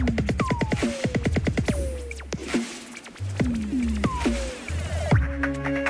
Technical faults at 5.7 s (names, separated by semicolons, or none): none